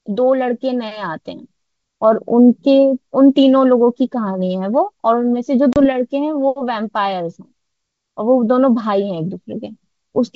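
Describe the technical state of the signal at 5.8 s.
At 5.8 s the signal shows packet loss on an ADPCM call, spanning 5.73 to 5.86 s. About 30 ms of audio drops out, roughly three packets' worth. The gap is filled with silence and has hard edges. The decoder's adaptive predictor and step size lose step with the sender's. So the speech comes back slightly distorted. It settles within some tens of milliseconds.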